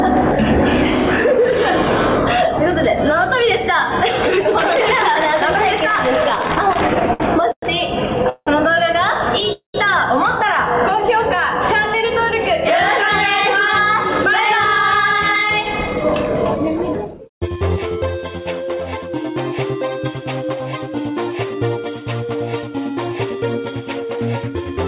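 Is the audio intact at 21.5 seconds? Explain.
Yes, the audio at 21.5 seconds is intact, carrying only the narrowband character of the call path, with nothing above 4 kHz.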